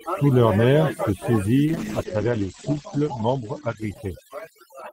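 Overdone noise removal runs throughout the speech: bands near the noise estimate are pulled down too far, leaving a lowered background that breaks up into twinkling specks. From 1.67 s to the end, a call bitrate drop makes the encoder code more coarsely. The top end falls from 20 kHz to 8 kHz, and the sound turns rough and muffled, bottoming out for about 1.3 s, which fits a fall from roughly 32 to 11 kbps.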